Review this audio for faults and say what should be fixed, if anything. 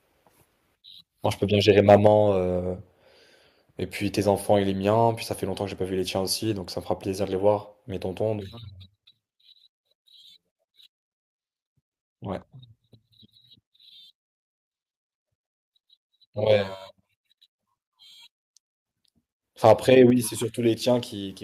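From 1.89 to 2.07 s, and again from 19.66 to 19.72 s, the loudest peaks turn harsh and crackly, overshooting the converter's ceiling by about 4 dB and then about 3 dB. This is likely microphone overload, with a few percent of samples sliced flat at the limit. Codec distortion smears across quiet passages too, but this harshness appears only on those peaks. Setting the microphone input gain lower before recording would leave headroom above the loudest syllables.

At 2.07 s and at 20.1 s, speech and background drop together in one instant step, by 5 dB and then 6 dB. This is likely microphone volume stepped down by call software reacting to the overloads. Someone moving away from the microphone would change the level gradually and leave the room sound steady, but here both fall at once. Disabling automatic microphone gain adjustment in the call software would stop these level jumps.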